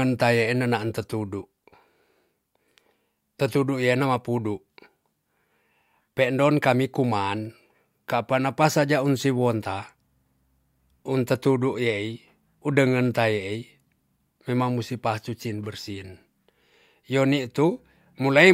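No technical faults can be heard anywhere in the speech.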